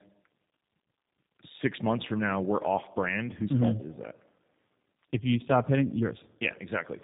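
Tandem speech coding affects the whole clip: the speech has passed through two low-rate speech codecs in a row, with a decode and re-encode at the border between them. The sound fits two passes through an 8 kbit/s coder such as G.729A, bridged by a G.711-type link. The second coder models an already degraded signal, so the speech is rough, muffled and warbly, with nothing above 3.8 kHz.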